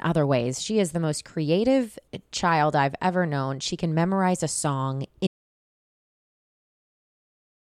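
At 5.27 s, just after "can memorize a song", the speech stops dead and the clip stays in total silence until it ends, about 2.4 s later. This is an audio dropout to silence: the gap holds silence, with no room tone or noise floor, so the signal was cut rather than faded. The likely cause is a lost input, such as a disconnected device, a failed link or a mute, while recording continued.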